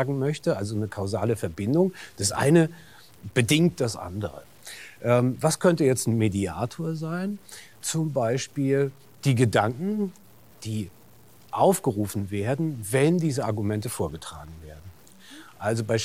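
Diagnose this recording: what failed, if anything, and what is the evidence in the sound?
The sample-format conversion likely truncated the speech to about 8 bits without dither. Throughout, a grainy distortion tracks the speech, roughly 35 dB below it. Quiet passages turn gritty, because the truncation error follows the signal instead of forming steady hiss.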